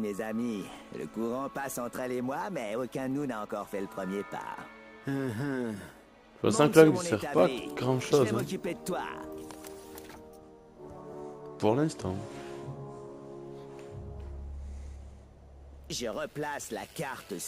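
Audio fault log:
1.14 s, overlap between stream segments: the time stamps of two consecutive segments claimed the same stretch of time, which fits segments about 2 s long. The player treated that stretch as duplicated and trimmed it, even though the sound there was not actually repeated. About 5 ms of audio was discarded, so the waveform on either side was spliced together with a sudden jump. That discontinuity is heard as a single short click or tiny skip.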